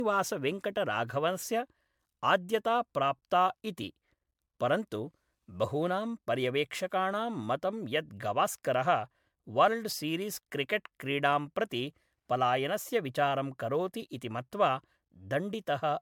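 Generation loss runs through the whole speech clip: the sound is swirly, smeared and hollow, with blurred consonant attacks, likely from around seven successive MP3 encodes near 128 kbit/s, content reaching 20 kHz.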